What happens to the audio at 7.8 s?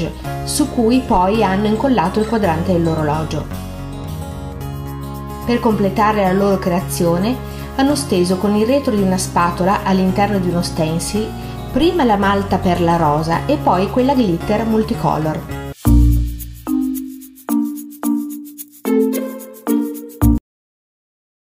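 Nothing goes wrong at 7.8 s: the audio runs on intact through that moment, with no dropout, click, glitch or other fault.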